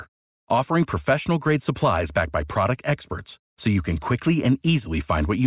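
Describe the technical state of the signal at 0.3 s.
At 0.3 s the speech signal is intact, with no audible fault at that moment.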